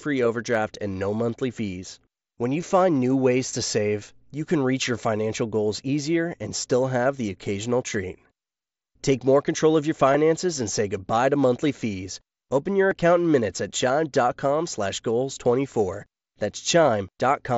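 Speech carried over a Bluetooth headset link that dropped voice packets three times: concealed Bluetooth headset packet loss at 2.61 s before "find new ways to", 10.13 s before "and say goodbye to", and 12.90 s before "account in minutes at". The receiver patched each 7.5 ms gap (15 ms at 10.13 s) with recently heard waveform, leaving the single-frame losses nearly hidden.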